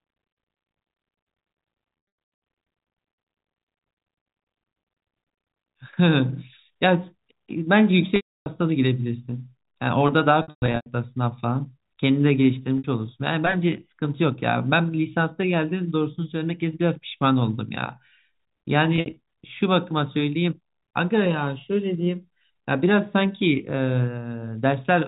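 Speech over a G.711 telephone path, band-limited below 4 kHz, is broken up by packet loss with pitch repetition at 1.98–2.42 s, 8.16–8.46 s, 10.42–10.86 s, 12.78–12.84 s and 18.96–19.16 s. The receiver bridges each gap by looping the last pitch period, heard as a held, buzzy tone. The 300 ms solid loss at 8.16 s and the scattered bursts at 1.98 s and 10.42 s, with runs up to 120 ms, fade to silence before speech cross-fades back. The brief 60 ms loss at 12.78 s only buzzes. The pattern fits 20 ms packets.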